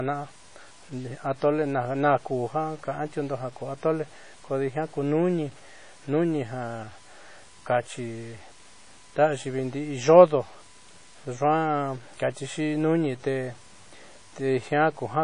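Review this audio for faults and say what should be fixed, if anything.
Grainy distortion runs through the whole speech recording, clinging to each syllable and turning the quiet tails of words rough, with noise sitting roughly 25 dB below the signal. The likely cause is low bit depth without dither, which fits 8-bit truncation: every sample is cut down to a coarse step, so the error tracks the waveform instead of staying neutral. A waveform zoomed in on quiet passages would show visible staircase steps, and a spectrogram would show broadband grit rising and falling with the speech. To prevent it, keep the audio at 16 or 24 bits, and add dither whenever the bit depth must be reduced.

The recording also has a smeared, washy quality from start to finish, with a hiss that swells and breathes with the speech and ringing around consonants. This is likely WMA compression at a low bitrate, around 32 kbps. 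The transform codec spreads its quantisation noise across long blocks and drops weak spectral detail. A spectrogram would show a hard ceiling with nothing above 10.1 kHz, plus blotchy, patchy gaps where quieter components were zeroed. To prevent it, keep a lossless master and, if encoding is required, use a modern codec at a higher bitrate.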